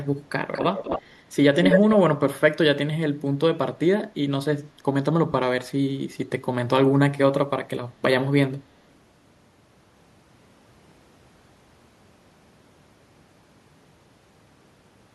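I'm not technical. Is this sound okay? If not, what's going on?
No. Echo leak at 0.53 to 1.14 s and 1.64 to 1.96 s: a copy of the speech returns about 0.24 s late, quieter at first, then nearly as loud. Likely a speakerphone whose echo canceller missed some of its own sound. Lost LE Audio frames at 0.90 to 0.99 s and 5.32 to 5.34 s: brief Bluetooth dropouts patched with noisy guesses of the previous sound, heard as short hissy smears.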